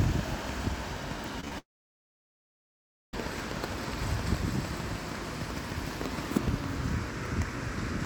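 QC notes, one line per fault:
0.04–6.65 s, train of clicks: about 40 evenly spaced ticks at 6.5 per second, peaking around 10 dB above the sound, likely from nearby interfering equipment.
1.40–1.53 s, short concealed packet loss: brief gaps of 10 to 20 ms at 1.40, 1.45 and 1.48 s, bridged by extending the preceding sound, giving quick smears rather than silence.
1.59–3.14 s, long network dropout: about 1.5 s of audio lost, likely to a stalled network, with a fading fill followed by near-silence before the sound resumes further on.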